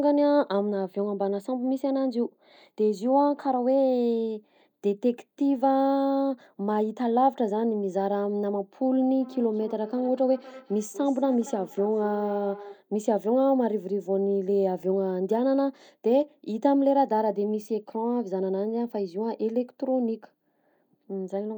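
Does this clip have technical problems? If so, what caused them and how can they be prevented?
Yes. From 9.21 to 12.83 s the speech returns roughly every fifth of a second, thin and ringing, about 18 dB down. This is feedback echo between two devices: one device plays the call audio, and a nearby microphone on the same call picks it up again, which its own echo canceller cannot remove. To prevent it, keep only one device joined with audio in the room, or mute the other device's speaker and microphone.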